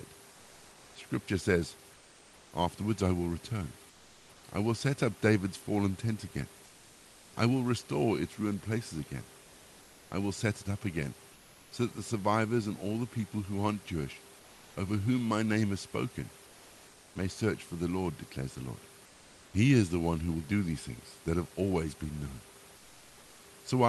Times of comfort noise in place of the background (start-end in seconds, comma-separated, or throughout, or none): 0.31-2.51, 3.89-4.43, 6.65-7.33, 9.41-11.71, 14.39-14.75, 16.47-17.15, 19.05-19.53, 22.77-23.43